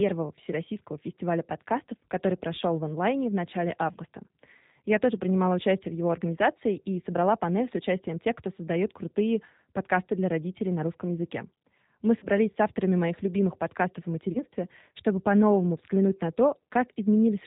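From the first moment to the last, the speech carries the sound of the G.729 codec, here in its G.729A form at 8 kbit/s, with plainly audible damage. The codec rebuilds each 10 ms frame from a vocal tract filter, a pitch predictor and a few pulses, so the speech has a rough, slightly synthetic edge. On a spectrogram everything stops sharply at 4 kHz, and harmonics look smeared and grainy rather than clean.

At 3.92 s, right after "в онлайне в начале", comes the first VoIP packet loss concealed by the speech codec. About 30 ms of audio went missing, which fits a single lost packet. The decoder filled the hole by extending its last pitch and filter at falling gain, giving a brief buzzy tone or coloured noise that fades, lasting until about 3.96 s. A waveform shows a short, overly regular stretch with shrinking amplitude.

The same fault returns at 12.19 s, just before "с авторами моих любимых", again with about 30 ms lost. 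This time the weakened, distorted sound runs to about 12.27 s, because each decoded frame builds on the previous one and the error takes a while to wash out.

A third loss follows at 14.32 s, right after "моих любимых подкастов о". Again about 30 ms is missing, and the recovery lasts until about 14.43 s. On a spectrogram, each of these three spots appears as a flattened, repeated harmonic pattern that fades instead of following the natural movement of the speech.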